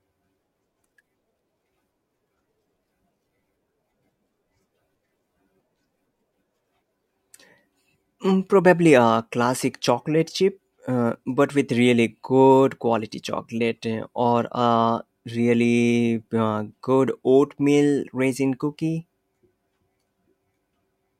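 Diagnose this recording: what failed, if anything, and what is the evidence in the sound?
Nothing failed; no fault is audible in this speech.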